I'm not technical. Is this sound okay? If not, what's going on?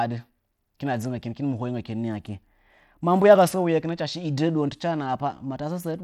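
No. Throughout the speech, the treble flickers and a gritty haze rides on it, likely Bluetooth SBC compression squeezing the sound over a wireless link.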